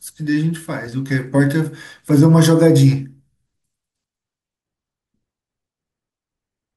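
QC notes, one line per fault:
0.86 s damaged data in the compressed stream: a brief glitch as the decoder misreads corrupt frames and resyncs.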